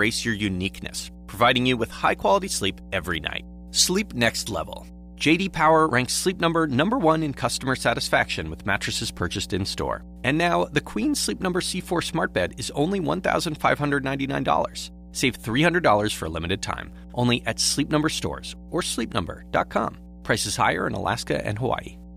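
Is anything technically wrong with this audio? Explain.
Yes, there is mains hum underneath the speech for the whole clip. A ground loop or a nearby transformer is leaking the 60 Hz power-line frequency into the signal path, so a steady low tone sits at a level of about 20 dB below the speech. It is most obvious in the pauses. On a spectrogram it shows as a continuous horizontal line at 60 Hz from start to finish. On the waveform the pauses fill with a regular low-frequency ripple instead of flat silence.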